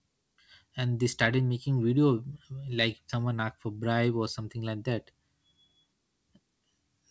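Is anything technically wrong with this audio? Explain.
No, nothing is technically wrong with this audio.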